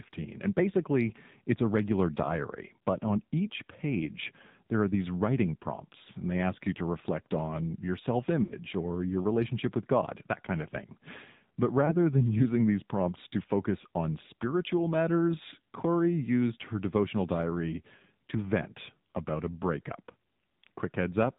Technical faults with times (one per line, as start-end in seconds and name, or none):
0.00-21.38 AMR narrowband mobile codec
8.44-8.53 lost AMR speech frames
11.86-11.96 lost AMR speech frames